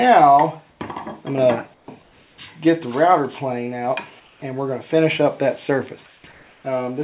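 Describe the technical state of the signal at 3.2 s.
At 3.2 s the signal is intact, carried over a call path whose narrowband coding, which fits G.711 A-law, leaves nothing above 4 kHz.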